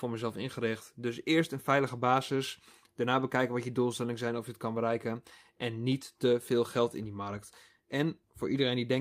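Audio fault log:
No audible faults detected.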